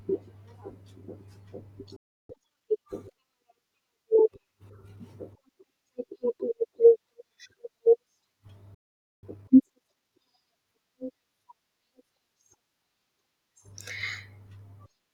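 At 1.96 s the speech cuts out mid-flow and the output stays silent until 2.29 s, a gap of about 0.33 s. This is a playback stall, likely caused by the player running short of buffered data or its output thread being held up. The speech then resumes, but the break is clearly audible.

From 2.29 s to 2.93 s the player runs a time-compressed catch-up to work off the delay. It removes short slices of the signal and cross-fades across the joins, which plays the speech at 1.5 times normal speed without raising the pitch. The passage sounds hurried.

A second playback stall runs from 8.74 s to 9.23 s and lasts about 0.48 s. It is likely caused by the same kind of data shortage. The signal drops to silence and then picks up again. A matching time-compressed catch-up follows from 9.23 s to 10.19 s, again at 1.5 times speed. The rushed delivery lasts longer here than in the first catch-up.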